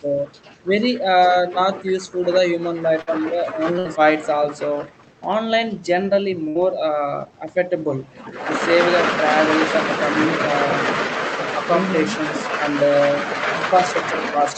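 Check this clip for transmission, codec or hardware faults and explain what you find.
Three short dropouts can be heard, each a burst of packet loss, carried over a call path whose high frequencies stop at about 8 kHz. At 3.01 to 3.10 s, 3.79 to 3.88 s and 6.49 to 6.58 s, the sound briefly smears and fades for 54 to 63 ms, then skips ahead with about 60 ms missing. Packets went missing in transit, and the receiver filled each gap by extending and fading the last sound before resuming.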